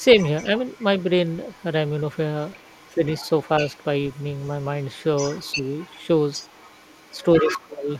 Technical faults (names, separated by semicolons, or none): other side's voice leaking through; speech suppressed in double talk